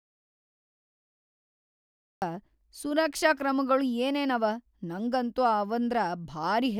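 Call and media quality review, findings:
Audio dropout to silence from clip start to 2.22 s: silence, no room tone, speech enters abruptly mid-flow at "ಸುರಕ್ಷಾ ಕ್ರಮಗೊಳ್ ಏನೇನವ ನಂಗಂತೂ". Likely input loss upstream, such as a device disconnect, link failure or mute, with the encoder writing silence. Preceding content unrecoverable.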